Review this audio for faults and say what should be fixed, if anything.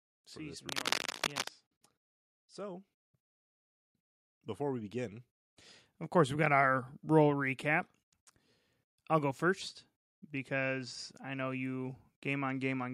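From 0.69 to 1.48 s, cable scratch noise sits over the speech at roughly the same level, a dense, uneven crackle. It's likely a worn cable or connector being moved, its contact resistance jumping about. On a spectrogram it shows as ragged broadband vertical streaks, and in the waveform as spiky fuzz riding on the signal. Replace or reseat the suspect cable and keep it strain-relieved so it can't shift during recording.

Between 4.32 and 6.55 s, just before "roll recap", automatic gain rising lifts the level by about 5 dB. The gain control judged the input too quiet and ramped up, swelling voice and background together. The waveform envelope widens steadily, and the spectrogram brightens evenly across all frequencies, noise floor included. Disable the automatic gain control and set a fixed input level with adequate headroom before recording.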